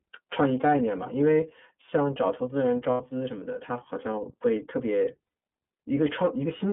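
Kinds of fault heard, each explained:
iLBC codec: Throughout, the speech sounds clear but plainly rough and slightly synthetic, confined to a narrow line band of roughly 200 Hz to 3.6 kHz. Each frame's excitation is coded independently, and the coarseness fits iLBC's 13.33 kbps mode with 30 ms frames.
lost iLBC frames: At 2.91 s and 5.24 s, about 90 ms of speech turns into a held, faintly buzzy vowel before clean speech returns at once. The decoder repeated the last pitch cycle with added noise, which fits three lost 30 ms frames each time.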